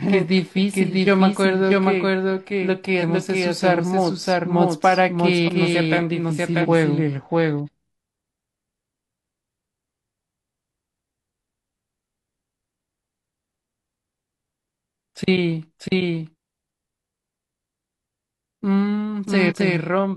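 Throughout the clip, a doubled audio track places a second, equally loud copy of the speech about 0.7 s behind the first. It is likely a second capture path or a misaligned edit. On a spectrogram, every syllable's harmonic pattern repeats as a clean, full-band shadow with no reverberant tail.

At 2.98, 5.44, 6.60, 7.62 and 19.46 s, compressed frames are skipped. Each time, the speech leaps forward by roughly 0.2 to 0.5 s, consistent with whole frames of about 46 ms being lost.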